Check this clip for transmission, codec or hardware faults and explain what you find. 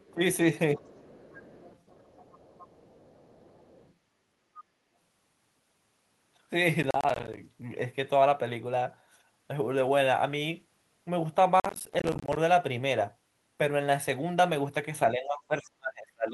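Three kinds of fault are present in this speech clip.

Other side's voice leaking through at 0.0–0.14 s, 0.82–3.94 s and 4.54–4.64 s: a faint second voice about 25–30 dB below the talker, likely residual loudspeaker echo the canceller missed.

Speech suppressed in double talk at 0.13–0.2 s, 0.77–0.81 s and 15.11 s to the end: the talker's level dips, briefly at first, then deeply near the end, likely from the echo canceller attenuating during simultaneous talk.

Processor overload crackle at 6.83–7.37 s and 11.60–12.37 s: dense runs of tiny silent gaps with hard edges give a gritty tearing, which fits missed deadlines on roughly 10 ms buffers.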